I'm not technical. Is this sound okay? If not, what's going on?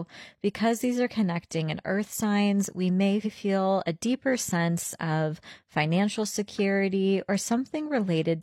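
No, there's one glitch. At about 3.21 s the speech hiccups: a tiny slice, roughly a tenth of a second (about 93 ms, running to 3.30 s), gets played twice in a row, so you hear a quick stutter, maybe with a small click where the copy joins on. That's called repeated frames. The audio is stored in small compressed chunks, and here what sounds like a couple of chunks got written twice, which also makes the clip about 93 ms longer.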